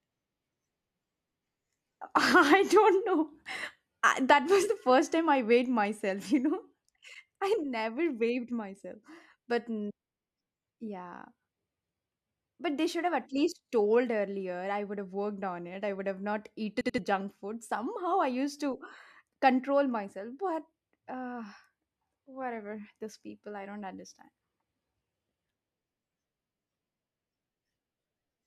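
At 16.81 to 16.98 s, between "I would have not" and "junk food", a repeated buffer makes the same 85 ms slice of speech play twice more with hard joins, a rhythmic stutter consistent with a 4096-sample buffer. Unlike a dropout, the gap is filled by duplicated sound rather than silence, and about 150 ms of new audio goes missing.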